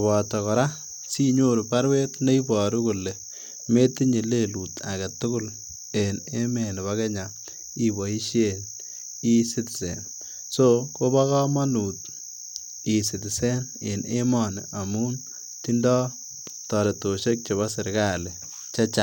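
No technical faults can be heard anywhere in the speech recording.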